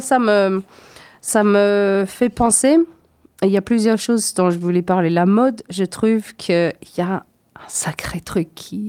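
No technical faults can be heard anywhere in this recording.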